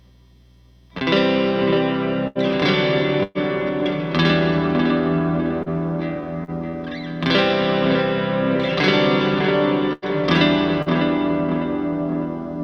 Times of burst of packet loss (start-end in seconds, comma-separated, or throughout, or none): 2.27-2.38, 3.23-3.38, 9.93-10.05